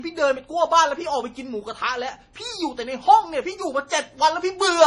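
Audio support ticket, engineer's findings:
Watery, swirling texture on the whole clip. Sibilants chirp and sound metallic. Onsets smear. Likely cause: MP3 compression, heavily starved of bits, which fits a low bitrate around 32 kbps. Weak frequency lines are zeroed and flicker on and off between frames, giving the swirl.

Pre-echo at 3.89 to 3.91 s. Brief hiss of about 20 ms just ahead of a sharp attack. The attack itself sounds softened. Component: the same transform codec. Its quantisation noise is spread across the whole block. The attack sits late in that block, so noise sized for the loud part also fills the quiet gap before it.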